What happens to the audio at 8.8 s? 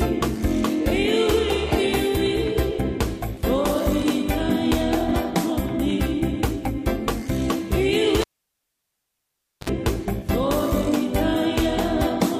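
At 8.8 s the signal is gone: a cable pulled and plugged in spans 8.21 to 9.69 s. A pop marks the pull, then about 1.43 s of near silence, then a 55 ms burst of 50 Hz mains buzz as only the plug tip makes contact, and a second pop as the sound returns. The pops at both ends and that hum burst distinguish it from a clean digital dropout, which would just fall silent.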